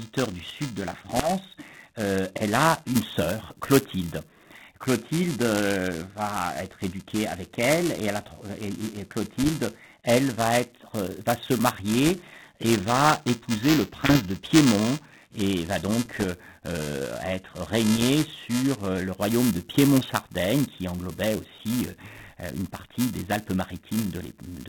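Buffer tearing runs through the whole clip: writer and reader of the ring buffer cross each period, splicing in a small slice of audio about 10 ms old, giving a steady 375 Hz buzz (which fits a 128-sample buffer) that, unlike a clock drift click, is present only while there is signal. Over the G.726 path, narrowband at what sounds like 32 kbit/s, bit errors on the ADPCM link strike at 1.14 to 1.30 s, 9.39 to 9.48 s, 12.06 to 12.31 s, 14.06 to 14.17 s, 16.05 to 16.24 s and 17.97 to 18.04 s. Each flipped bit upsets the decoder's predictor and step size, so pops smear into short rough bursts with level jumps, sporadic rather than periodic like the tearing.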